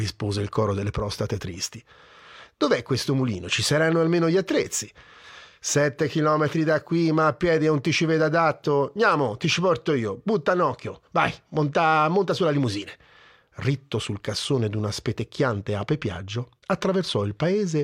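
No technical faults can be heard anywhere in this speech recording. Nothing in it points to a problem in how the sound was captured, processed or delivered.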